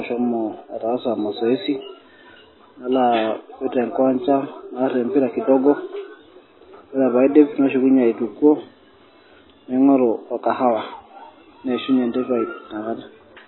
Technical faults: MP3 compression; dropped samples

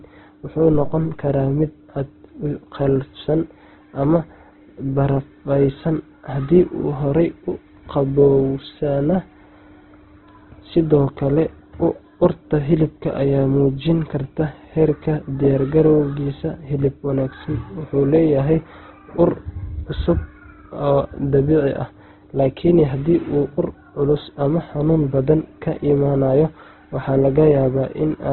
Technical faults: Opus compression; phantom power thump

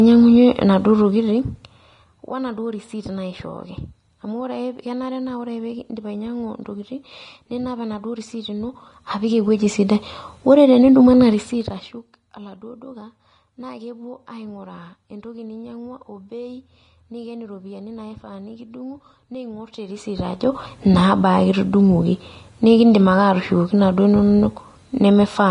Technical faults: Vorbis compression; zipper noise

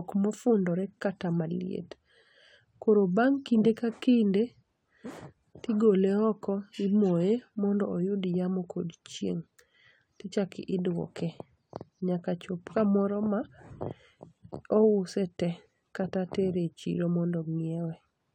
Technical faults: none

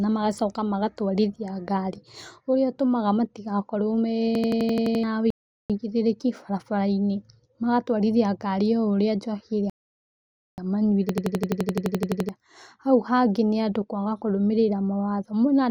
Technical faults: system hang loop; rebuffering stall

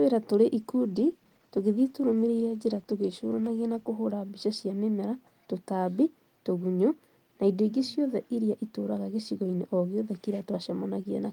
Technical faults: call bitrate drop

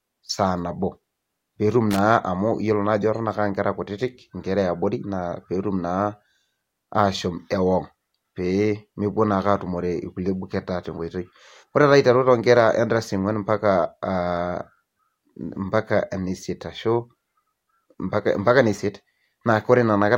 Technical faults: loose connector crackle

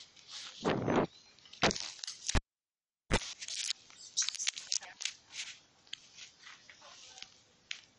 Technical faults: MP2 compression; cable pulled and plugged in

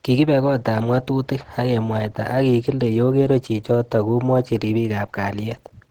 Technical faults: Opus compression

